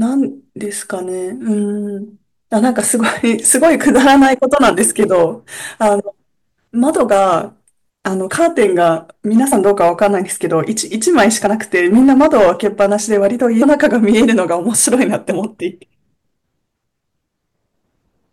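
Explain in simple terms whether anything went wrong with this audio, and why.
Yes. Hard clipping runs through the whole speech clip. The recording was pushed louder than the system could carry, so the loudest moments, a small share of the audio, have their tops sheared flat. That adds a gritty crackle on peaks rather than the steady hiss of background noise.

There are also compressed frames skipped at 9.51, 11.46, 13.61 and 15.30 seconds. Small blocks of the stored audio were lost or rejected, so the speech jumps ahead. The jumps are about 20, 40, 100 and 70 milliseconds, which fits blocks about 21 milliseconds long.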